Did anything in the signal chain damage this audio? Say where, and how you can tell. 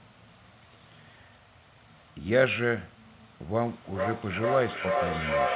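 Yes, at the call-processing stage: feedback echo between two devices from 3.53 s to the end. One device's playback re-enters the other's microphone, outside its echo canceller. Phrases return roughly every 400 ms at about 0 dB, so on a spectrogram evenly spaced copies stack up instead of fading.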